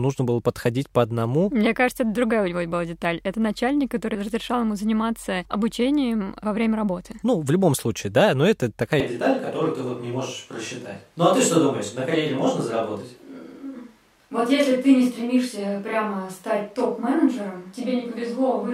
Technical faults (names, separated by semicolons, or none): switch to a distant microphone